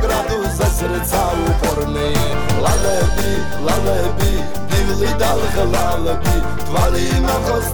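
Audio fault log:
2.09–7.10 s DC step: the waveform's zero line jumps by about -18 dBFS and returns at 7.10 s, each shift heard as a low thump.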